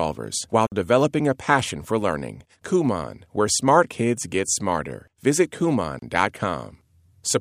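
Gaps at joins of encoded pieces cut into this speech at 0.67 s (50 ms, just before "developing a passion for") and 5.99 s (31 ms). The pieces were encoded separately and spliced untrimmed, so the encoder's start-up delay and end padding remain as short silences before the sound resumes where it stopped.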